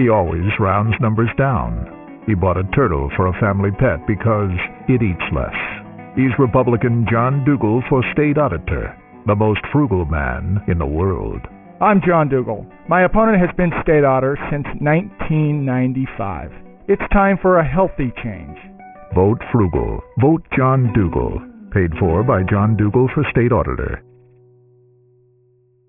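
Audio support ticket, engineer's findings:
Gritty, metallic high end throughout, spectrum packed hard against 3 kHz. Aliasing: downsampling without anti-alias filter, consistent with a 6 kHz rate; content above folds back, around 15 dB down.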